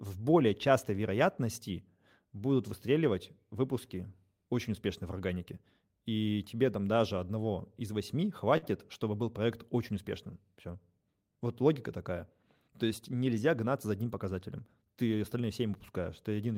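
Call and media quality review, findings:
Short stall from a late packet, 8.57 to 8.64 s. Speech held about 50 ms, slight buzz or dip. Jitter buffer ran dry, last sound stretched, resumed in place, nothing lost.

Jitter buffer speed-up, 12.68 to 13.29 s. Speech runs 106% speed, same pitch, hurried. Receiver trimmed pitch periods repeatedly, cutting about 50 ms of buffered delay.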